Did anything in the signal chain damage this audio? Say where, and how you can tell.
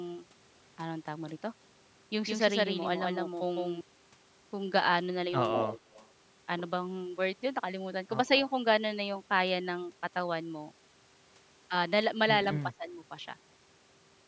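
Yes. A second capture path or an edit likely mixed the audio in twice: from 2.27 to 3.81 s, a doubled audio track trails about 150 ms behind, about 5 dB quieter, starting and stopping abruptly.

In the call processing, a far-end echo canceller likely let loudspeaker pickup through. This echo leak returns the voice 151 ms late, about 5 dB down, from 5.53 to 6.08 s.

Also in the call processing, both sides talking at once likely made the echo canceller duck the talker. Speech is suppressed in double talk from 12.66 to 12.87 s, dipping by roughly 15 dB.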